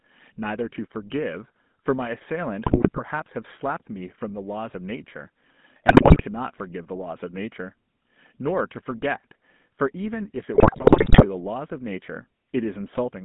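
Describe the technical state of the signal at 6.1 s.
At 6.1 s the signal sits inside a burst of GSM bit errors running from 5.86 to 6.23 s. Corrupted filter, pitch and gain values reach the decoder, so individual frames come out with bent spectra or sudden level jumps. The speech breaks into squawks, pops and gargling. A waveform shows abrupt amplitude spikes and dropouts, and a spectrogram shows smeared, blocky 20 ms columns.

Underneath, the GSM full-rate codec is present the whole way. It rebuilds the voice from a vocal-tract model driven by coarse, regularly spaced pulses, which fits a 13 kbit/s full-rate stream. The result is a plainly buzzy, gravelly roughness. A spectrogram shows energy confined between 150 Hz and 3.6 kHz, with harmonics looking grainy and stippled.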